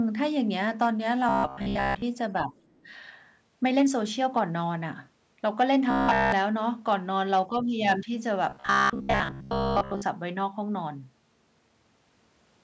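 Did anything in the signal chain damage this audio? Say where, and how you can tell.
Yes. There's robotic sound from repeated short buffers at 1.29–2.02 s, 5.91–6.32 s and 8.49–10.02 s, where the voice turns into a rigid, metallic buzz at about 67 Hz. That's likely a starved driver or buffer stage replaying roughly 15 ms slices, covering most of the first and third stretches and all of the second.

Next, speech suppressed in double talk at 2.47–2.54 s and 7.48–7.57 s. The talker briefly sags, by about 10 dB the first time and about 5 dB the second. The likely cause is the call's echo canceller, which couldn't separate near speech from far-end echo while both overlapped and pulled everything down.

Then the other side's voice leaking through at 2.66–2.79 s. A faint second voice sneaks in, sitting about 40 dB under the main speech. That points to the call processing again, with the echo canceller likely leaving a scrap of loudspeaker pickup in the microphone signal.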